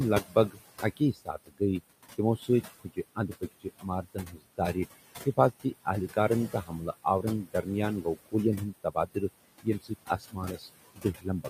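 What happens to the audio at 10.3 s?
At 10.3 s the speech is being cut by the noise suppressor, in a stretch running from 9.62 s to the end of the clip at 11.49 s. The suppressor mistakes part of the speech for steady background and turns it down along with the noise, by about 19 dB at the deepest point, so the speech sounds swallowed and faint. On a waveform the speech envelope shrinks across that span; on a spectrogram the harmonic bands and high-frequency consonant energy fade toward the noise floor.

This sits on top of noise suppressor artifacts present throughout. The processor lowers the bands it judges to be noise, frame by frame, by about 18 dB, so the room noise, about 15 dB under the speech, sinks in the gaps and rises beneath the speech. A spectrogram shows the background floor pumping between darker gaps and lighter speech regions.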